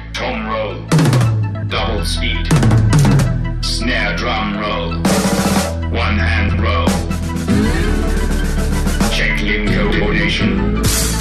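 Frames out of order occur at 1.55–1.71 s, 6.49–6.59 s and 9.91–10.12 s. Each time, two neighbouring blocks of about 78, 52 and 105 ms play swapped, which fits runs of three, two and four frames. The result is a garbled flutter, and no time is lost.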